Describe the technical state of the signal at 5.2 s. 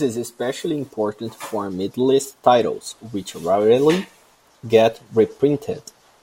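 At 5.2 s the speech signal is intact, with no audible fault at that moment.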